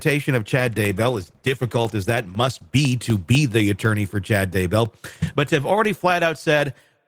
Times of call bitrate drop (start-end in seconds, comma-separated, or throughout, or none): 0.58-2.87